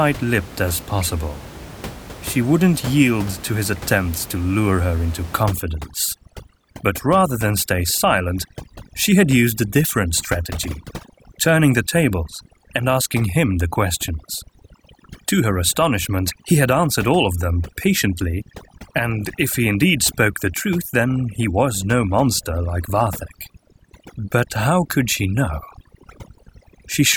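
A speech recording with overdone noise removal from 5.43 s, just after "to lure her into", to the end: over-aggressive spectral gating mutes bands near the room noise, which sits about 16 dB below speech, leaving twinkling near-silence.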